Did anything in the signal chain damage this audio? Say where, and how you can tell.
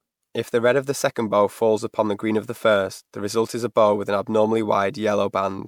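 Yes, at the codec. The speech is swirly, hollow and smeared throughout, with blurred attacks. That is generation loss, likely several MP3 re-encodes, fitting 128 kbit/s.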